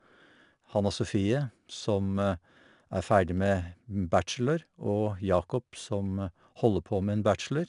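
From start to end the speech carries 4-bit ADPCM compression: each sample is coded as a coarse step from a prediction, so a gritty hiss rides on every loud syllable. Nothing sounds above 10.6 kHz, which fits a reduced sample rate, with a bitrate near 89 kbps.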